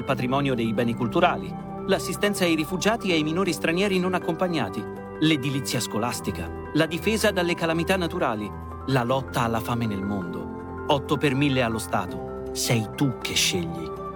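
No technical faults can be heard anywhere in the audio, so there is nothing to describe in time order.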